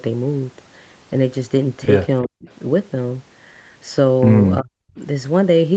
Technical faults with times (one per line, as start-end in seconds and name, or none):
2.22-2.48 speech suppressed in double talk
4.61-4.99 speech suppressed in double talk